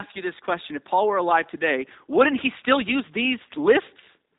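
From start to end, the speech carries G.729 codec damage. Nothing above 3.8 kHz survives, so it sounds dull and boxy. Each short frame is rebuilt from a filter, a pitch predictor and sparse pulses, fitting 8 kbit/s. The result is plainly rough and synthetic.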